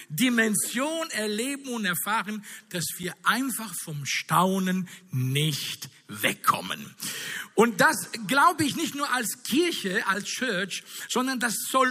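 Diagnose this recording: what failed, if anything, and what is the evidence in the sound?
A block of digital silence at 3.03 s points to the driver or buffer stage. There's a single tick where the audio drops to zero for about 5.8 ms and comes straight back, which fits a 256-sample buffer that wasn't refilled in time, so the hard edges click.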